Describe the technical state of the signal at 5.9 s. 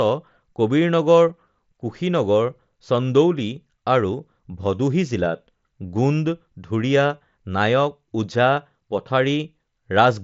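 At 5.9 s the speech is intact, carried over the wideband mSBC Bluetooth headset path at about 61 kbps, with nothing dropped or distorted at that point.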